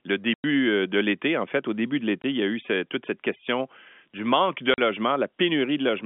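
The speech drops into dead silence three times, with hard edges each time: from 0.34 to 0.44 s (100 ms), from 2.22 to 2.24 s (20 ms), and from 4.74 to 4.78 s (40 ms). This is packet loss filled with silence. Packets never arrived and the receiver played nothing in their place. The hole lengths are all multiples of 20 ms, which points to 20 ms packets, over a G.711 telephone-band line.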